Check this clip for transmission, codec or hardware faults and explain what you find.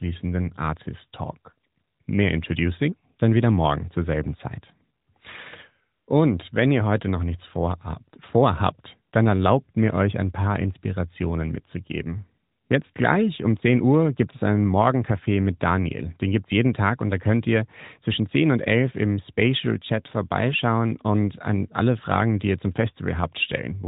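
No transmission, codec or hardware faults can be heard in this speech. It comes through an AMR narrowband mobile codec at 12.2 kbps, so nothing above about 3.8 kHz is present and the codec leaves only a light trace.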